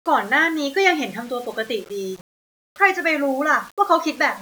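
Grainy, gritty distortion runs through this speech clip from start to finish, clinging to the voice rather than sitting under it as steady hiss. Quiet passages and decaying word endings sound rough and sputtering, and the error sits only about 25 dB below the signal. The likely cause is low bit depth without dither: samples rounded to very few levels, which fits roughly 7-bit resolution, so the error tracks the signal.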